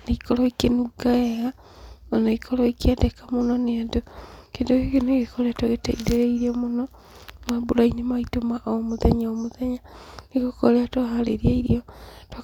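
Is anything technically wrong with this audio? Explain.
No, nothing in this speech recording stood out as a technical problem on listening.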